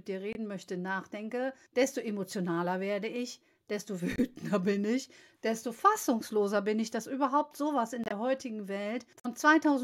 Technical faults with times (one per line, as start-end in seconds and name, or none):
0.33-0.37 corrupt frame muted
4.16-4.20 corrupt frame muted
8.04-8.12 corrupt frame muted
9.19-9.26 corrupt frame muted